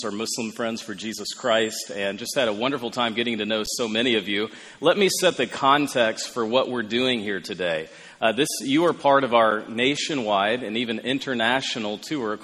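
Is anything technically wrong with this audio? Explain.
Yes, there are three brief underruns with held sample, at 3.66, 5.31 and 9.51 s. The output buffer ran dry and the converter froze on its last value for about 10, 4 and 8 ms. The sound flatlines almost silently, then resumes where it stopped with only a soft edge.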